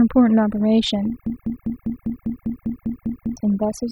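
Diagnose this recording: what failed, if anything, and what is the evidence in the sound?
The whole clip shows overdone noise removal, a call-processing stage. The background drops to near silence with little twinkling specks in it. The noise reducer was set far too hard. It shuts individual frequency bands whenever they sit near its noise estimate, and the quieter parts of the voice fall under that threshold and get stripped along with the noise.

From 1.26 s to 3.37 s there's a broken-record loop: a chunk of about 0.2 s (199 ms) plays back to back, identically, 11 times. Something upstream, likely the player or the stream feeding it, stalled and kept handing over the last fragment in its buffer instead of fresh audio. Whatever should have been heard across those two seconds never arrives; it's simply gone.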